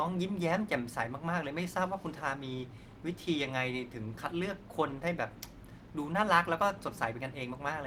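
Nothing to flag: no audible technical faults at any point in the speech.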